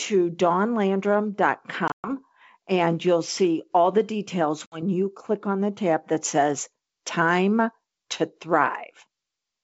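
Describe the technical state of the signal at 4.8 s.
Packet loss on an ADPCM call, 4.66 to 4.83 s: a hard 60 ms silent hole, then a slightly distorted return while the decoder's predictor and step size resync, unlike a clean dropout.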